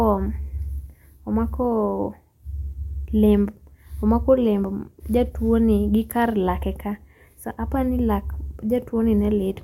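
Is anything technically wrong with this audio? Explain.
No, the signal carries the speech without any technical fault that can be heard.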